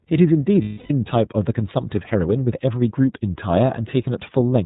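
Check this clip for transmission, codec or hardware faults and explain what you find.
Two faults are audible in this speech clip: narrowband codec coloration throughout and a brief concealed dropout.

iLBC codec, whole clip: the speech is band-limited with nothing above 4 kHz, and each frame's excitation is coded independently. This makes the voice plainly rough and synthetic, consistent with the 13.33 kbps mode using 30 ms frames.

Lost iLBC frames, 0.62 to 0.91 s: about 270 ms of packets were lost, which fits nine 30 ms frames. The decoder repeats the last pitch cycle mixed with noise, producing a held, buzzy vowel that fades, then recovers almost immediately.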